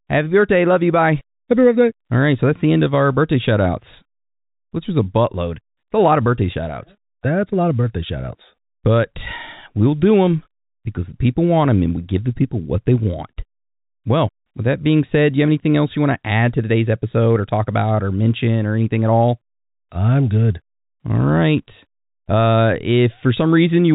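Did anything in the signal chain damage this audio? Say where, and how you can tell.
No, nothing in the signal chain damaged this audio; the only audible mark is the narrow telephone band of the G.711 coding, which is working as designed.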